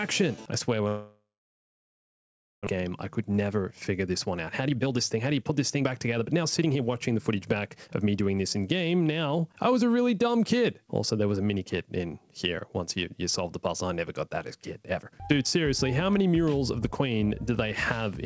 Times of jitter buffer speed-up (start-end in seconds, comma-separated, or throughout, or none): 2.76-3.59, 4.07-8.28